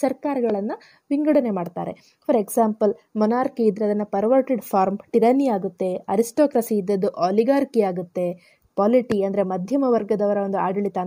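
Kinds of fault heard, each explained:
Loud pop: A sudden voltage pulse, likely from a plug, switch, static or driver glitch, entered the signal path. It is heard as one sharp pop at 0.50–0.52 s and another at 9.12–9.14 s, each roughly 10 dB above the sound, which continues underneath.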